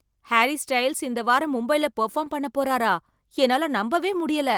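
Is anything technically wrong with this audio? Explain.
No, nothing technically wrong stood out on listening to this speech clip.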